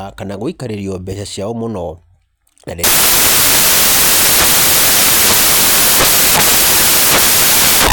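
Samples built from the wrong bytes take over this speech clip from 2.84 s to the end: the reader misassembles each sample's bytes, so the rapidly changing low bits become the dominant part of every value, producing loud, harsh broadband noise, close to white on the louder sounds.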